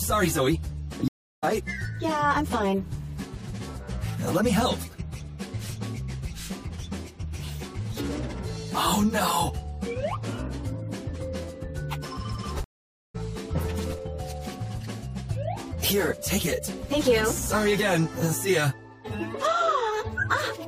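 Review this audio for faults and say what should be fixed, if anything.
Stream reconnect: the connection dropped and the player restarted its decoder mid-stream, leaving silence at 1.08–1.44 s and 12.64–13.16 s, after which the audio resumes about a third of a second further on. Fix it with a larger network buffer and seamless resume, so brief connection losses never force a decoder restart.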